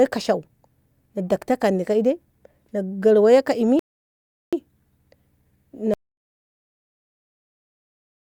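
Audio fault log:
3.79 to 4.53 s, rebuffering stall. The speech halts into silence for about 0.73 s, then picks up exactly where it stopped. The player ran short of downloaded audio and waited for more. Nothing is missing. The clip just runs longer.
5.94 s to the end, audio dropout to silence. The speech cuts off mid-flow and never returns. The gap is pure silence with no room tone beneath it. The likely cause is a lost input, with silence written in its place. Whatever followed is gone.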